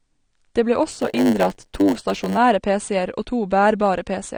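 From the start the speech is dull and smeared, with a fizzy, warbling texture on sibilants and held sounds. This is plainly audible codec damage, likely from AAC compression. The encoder has a band limit and too few bits to code the spectrum cleanly, so fine detail turns to swirling noise. The sound points to AAC-LC at a low bitrate, something like 32 kbps.

From 0.89 s to 2.38 s a steady 100 Hz buzz sits over the speech, and the passage drags at 0.919 times normal speed. This is a block size mismatch (padded). One stage hands over blocks shorter than the next stage reads, and the shortfall in each is filled with silence. Those repeating gaps, 100 per second, make the buzz, and the added silence stretches the timing.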